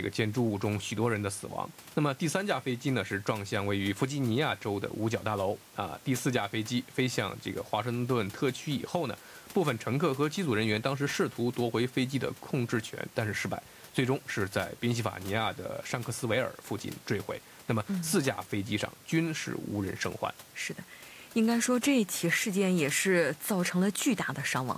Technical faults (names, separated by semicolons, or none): none